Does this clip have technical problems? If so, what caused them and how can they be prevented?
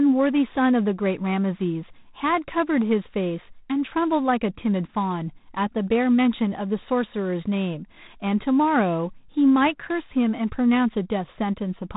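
Yes. G.726 ADPCM coding runs through the whole clip. Instead of storing each sample outright, the codec sends a few bits describing how far the speech strays from an adaptive prediction. Here too few bits are spent, which fits the 24 kbit/s mode. The result is a harsh, rasping hiss that rises and falls with the speech level, and nothing above 3.8 kHz survives. To prevent this, use the 32 kbit/s mode or a wideband codec.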